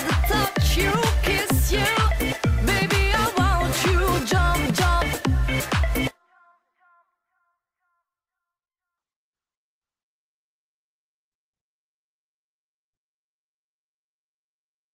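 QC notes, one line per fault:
8.98 s to the end: call bitrate drop. The bandwidth estimate fell and the encoder went from 48 kbps down to 14 kbps, and it stays at that floor for roughly the last 5.7 s without recovering. With that few bits it has to code much more coarsely, so the sound turns rough and watery, and at a rate that low the top end gets trimmed too, leaving it muffled compared with the first nine seconds.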